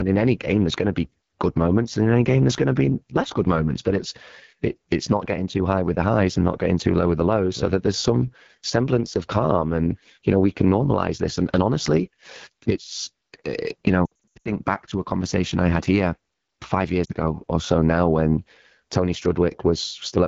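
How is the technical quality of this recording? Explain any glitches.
The technical quality is limited: the whole recording carries audible low-rate codec damage, and two bursts of dropouts interrupt the speech.

The AMR wideband (HD Voice) codec is present throughout the 20 seconds. AMR-WB models the voice as pulses driving a vocal tract filter up to 6.4 kHz and fills the band above that with shaped noise. At rates this low the pulse model runs short of bits, so the voice sounds rough and raspy, which fits one of the two lowest modes, around 8.85 kbit/s. This differs from MP3-style swirl or band-limited muffling: the raspiness sits in the voice itself, while the top band sounds like hiss.

Lost AMR speech frames occur at 14.06 to 14.50 s. Radio errors corrupted frames, and the decoder filled each gap by reusing the last good pitch and vocal tract settings at falling gain. Here about 280 ms are lost, scattered across 0.4 s, with the longest run 80 ms. 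That produces a warbling, stuttering stretch with brief drops toward near silence. Unlike packet-loss clicks or hard mutes, each gap sounds smeared and decays quickly, and the voice returns weak.

A second, shorter loss at 17.05 to 17.12 s drops 40 ms, heard as a brief dip and warble.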